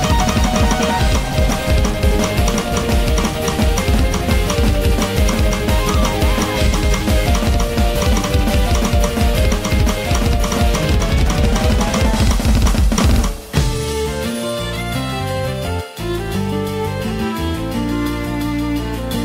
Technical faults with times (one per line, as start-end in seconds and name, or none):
none